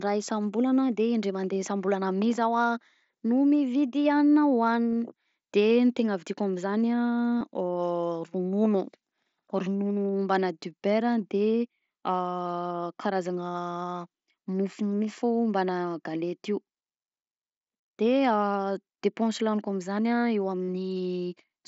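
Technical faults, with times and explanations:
4.93 to 20.68 s, concealed Bluetooth headset packet loss: gaps at 4.93 s, 7.39–7.41 s, 13.52–13.54 s and 20.65–20.68 s are filled by looping recent waveform. The scattered single losses at 4.93 s are nearly hidden, and the final gap loses 45 ms.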